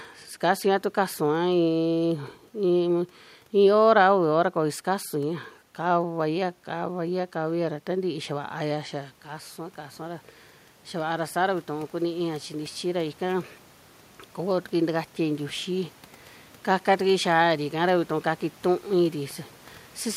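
Automatic gain rising in this speech recording, from 6.01 to 10.29 s by about 5 dB and from 10.91 to 13.49 s by about 4 dB after the input fell about 11 dB, lifts voice and room noise together.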